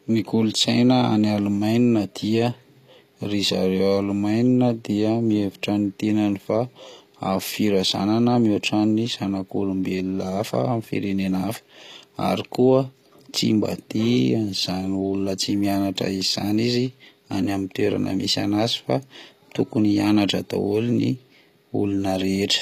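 Speech with gritty, lispy s sounds and synthetic-sounding treble throughout, nothing above 14.9 kHz; likely HE-AAC compression rebuilding the highs from copied lower bands, consistent with roughly 24 kbps.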